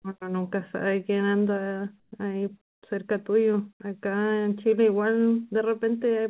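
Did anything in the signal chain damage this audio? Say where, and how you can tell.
Yes. From 2.0 to 2.12 s, a 120 ms stretch of background is replaced by comfort noise. The real room tone, already about 70 dB below the loud passages, gives way to a flat, featureless hiss about 6 dB different in level, then the original background returns. The likely cause is discontinuous transmission in the call processing: the sender's voice detector stopped sending, and the receiver filled the gap with synthetic noise. The G.711 mu-law path limits everything to below 4 kHz.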